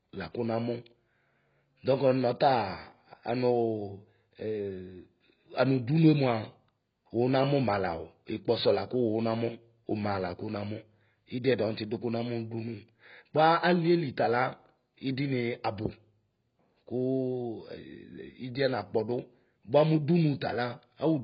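It's a speech clip, and the whole thing is audibly squashed by what's likely AAC compression. Nothing comes through above about 5.1 kHz, so it sounds dull and smeared from start to finish, and the damage is heavy. The encoder is clearly starving for bits, which fits AAC-LC at a very low rate, something like 16 kbps, dropping the top band and smearing what's left into that warbly, fizzy texture on the sibilants.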